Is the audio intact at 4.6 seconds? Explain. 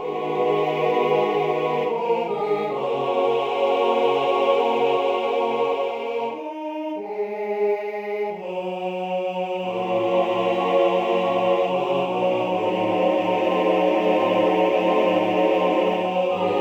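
Yes, at 4.6 seconds the audio is intact, with no dropout, click, distortion or other fault audible at that moment.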